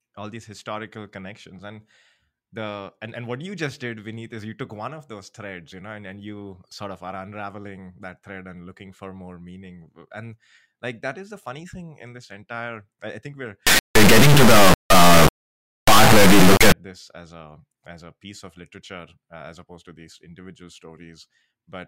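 Speech clip with an integer read as float fault from 13.67 to 16.72 s, after "i think we're" and before "this as a as". The 32-bit integer samples, decoded as 32-bit float, slam between silence and the clipping limit, producing a harsh square-wave buzz.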